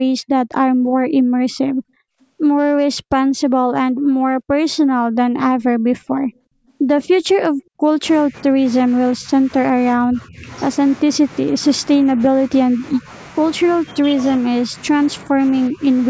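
From 6.34 to 6.72 s, a very faint delayed copy of the speech trails the original by about 370 ms, roughly 40 dB down. This is an echo leak, likely from a far-end loudspeaker whose echo canceller let residual pickup return down the line.

Speech suppressed in double talk follows, at 8.28–10.49 s, 11.43–13.11 s, 13.82–14.13 s and 14.67–15.84 s. The talker dips in patches by up to about 10 dB (about 5 dB at 13.82 s), likely an echo canceller ducking near-end speech while both sides spoke.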